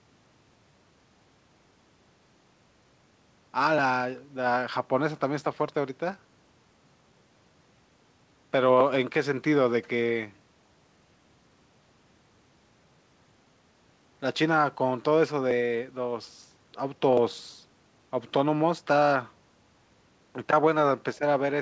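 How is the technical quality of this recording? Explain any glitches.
No faults to report; the speech has gone through a call path that leaves nothing above 8 kHz, which fits a wideband codec such as G.722 at 64 kbps.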